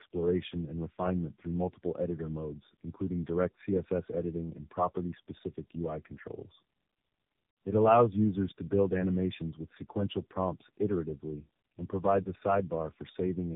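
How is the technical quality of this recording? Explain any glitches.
The quality is poor throughout, from one fault. Tandem speech coding runs for the whole clip: the speech passed through three low-rate narrowband codecs in a row, which fits AMR-NB, then G.729A, then AMR-NB again, decoded and re-encoded at each hop. Each coder compounds the last one's errors, leaving the speech rough, muffled and warbly, with nothing above 3.8 kHz.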